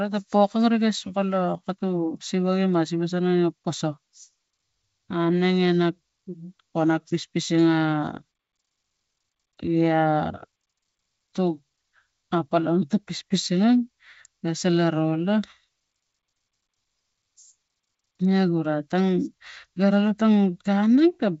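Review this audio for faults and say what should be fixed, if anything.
Nothing here needs fixing: the speech comes through G.722 wideband telephone coding at 64 kbit/s, with bandwidth reaching up to about 7 kHz and at most a faint trace of the codec's upper-band coding audible.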